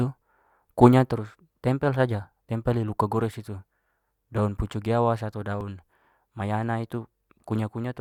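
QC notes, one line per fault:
5.61 s, overlap between stream segments: about 8 ms of speech is trimmed at a segment join, so the waveform jumps and is heard as a tiny skip, without the gap a dropout leaves.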